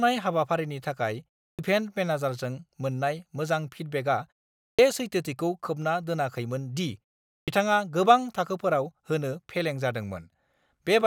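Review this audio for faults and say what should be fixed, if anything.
Clipped start after a pause at 1.53, 4.72 (after "मोजां फिडबेकआ") and 7.42 s. The output sleeps in silence, so about 57 to 66 ms of speech onset is lost. Keep the output device awake through pauses.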